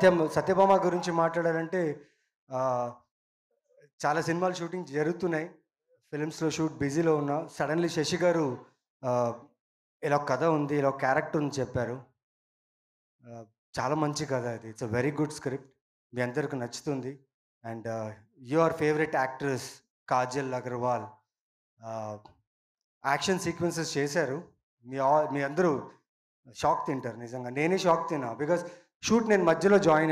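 No technical faults can be heard anywhere in the recording. Nothing in the sound suggests a problem in how it was captured, processed or delivered.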